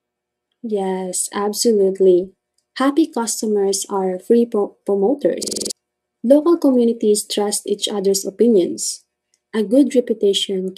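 Speech clip with a system hang loop from 5.43 to 5.71 s: a 46 ms chunk repeats six times at 21.5 Hz, giving a fast rattling stutter while the hardware cycled one ring buffer, which fits a 2048-sample buffer. Around a third of a second of real audio is lost.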